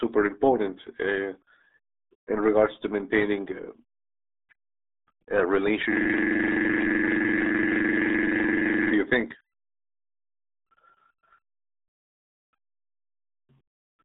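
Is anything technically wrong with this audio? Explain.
Yes. Throughout, the RealAudio 14.4 codec's 8 kbit/s coding cuts everything above 3.8 kHz and leaves gargly, smeared speech, not the clean narrowness of a telephone band-limit. From 5.93 to 8.92 s, just before "you think", a system hang loop repeats one 42.67 ms slice, consistent with a 2048-sample buffer, as an identical 23.4 Hz buzz rather than irregular dropout stutter.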